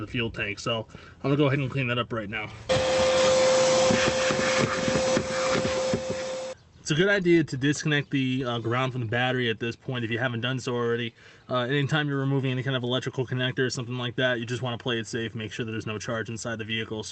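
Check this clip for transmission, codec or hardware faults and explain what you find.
No faults found.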